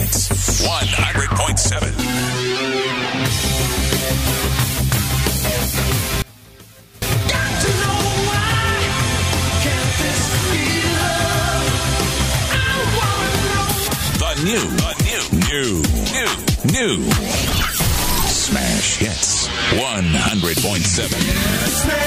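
The sound drops by about 24 dB between 6.22 and 7.02 s, leaving only a faint trace for that 0.8 s. The likely cause is one channel inverted: with reversed polarity, whatever both channels share cancels on summing to mono, so only their small difference survives.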